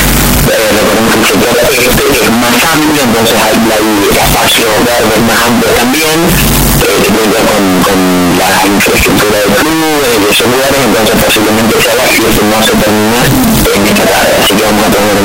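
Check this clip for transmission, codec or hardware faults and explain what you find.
There is one fault, and it runs through the entire clip: a signed and unsigned mix-up. The audio is loud and harshly distorted from start to finish, and quiet stretches come through as loud as everything else. The likely cause is that the samples were read with the wrong signedness, which fits 16-bit data. Flipping the top bit turns every small swing around zero into a jump across the full range, so low-level sound becomes loud, harsh noise.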